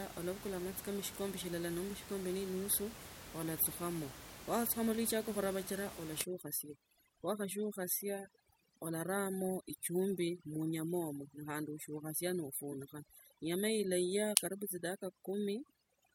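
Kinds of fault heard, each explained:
Overdone noise removal: a noise reducer set too hard mutes bands near its noise estimate, so from 6.24 s the background drops and breaks up into twinkling specks.
Corrupt frame decoded: damaged compressed data was decoded anyway, misplacing energy in frequency, giving a brief, fairly quiet glitch across a couple of frames at 12.70–12.74 s.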